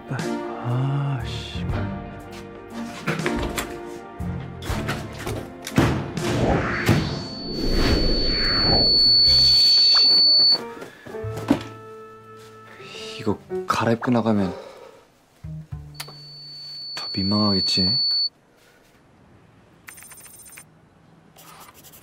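At 6.73 s a loudspeaker feedback squeal kicks in: a single 4.5 kHz tone swells over a couple of seconds to about 10 dB above the sound and holds until 10.6 s. It returns, a bit quieter, from 15.94 to 18.3 s.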